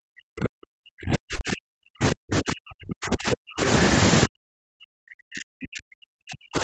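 Speech suppressed in double talk runs from the start of the clip to 3.67 s. The speech sinks and breaks up, dropping by as much as roughly 40 dB at its deepest. The likely cause is that someone on the far end was talking at the same moment, so the echo canceller couldn't tell this talker from its own loudspeaker echo and attenuated everything it picked up.

Short concealed packet loss falls inside that stretch, at 1.35 to 1.42 s. About 40 ms of audio arrived too late for the decoder, and the receiver covered 35 ms of the gap by extending the preceding sound before blending back into real audio. It comes across as a brief smear or wobble, and any short consonant there may be lost. This happens on an Opus path whose content stops at 8 kHz.

Speech suppressed in double talk returns from 4.25 s to the end. The same ducking and chopping sets in, again reaching roughly 40 dB down at its deepest. 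The canceller is likely once more treating simultaneous talk from both ends as echo and pulling the near talker down along with it.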